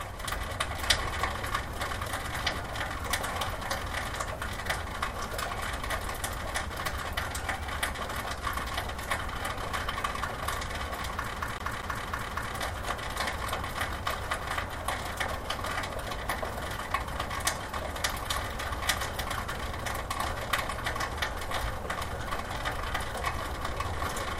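A CD stuck on one turn runs from 11.35 s to 12.53 s. A scratch on the disc keeps throwing the laser back to the same track position on each rotation, so one slice of sound, about 237 ms long, plays five times in a row. A brief mute marks every jump back, which gives the passage the quick, evenly spaced stutter of a skipping disc before playback moves on.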